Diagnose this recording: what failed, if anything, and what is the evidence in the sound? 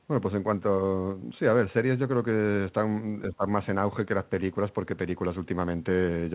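Call processing is where it trips up: from 3.31 to 3.46 s the speech ducks by about 15 dB for roughly 150 ms, then recovers. That's likely speech suppressed in double talk. The echo canceller couldn't tell the talker from far-end echo and attenuated both.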